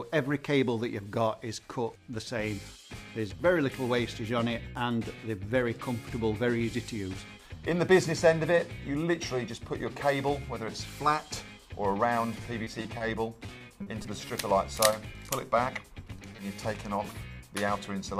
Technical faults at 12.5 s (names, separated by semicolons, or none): repeated packet loss (robotic sound)